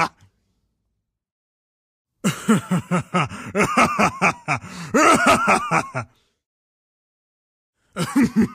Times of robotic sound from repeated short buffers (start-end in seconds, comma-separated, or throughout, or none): none